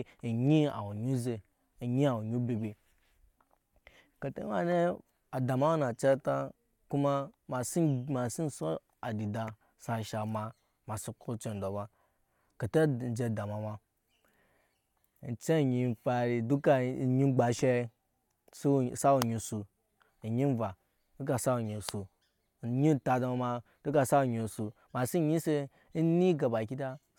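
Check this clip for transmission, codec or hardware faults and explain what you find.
Nothing in the speech signal points to a transmission, codec or hardware fault; it stays continuous and steady throughout.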